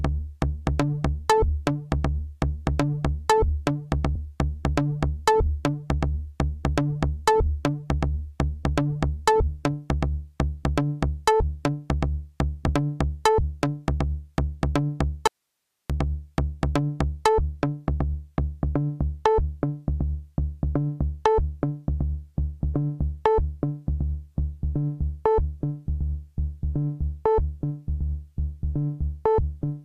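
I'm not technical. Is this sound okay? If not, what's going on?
No. From 15.27 to 15.90 s there's an audio dropout to a faint residue: the sound cuts off abruptly for about 0.6 seconds, leaving only a faint hiss, then snaps back. Unlike a natural pause or fade, it's sudden, likely from a brief signal loss.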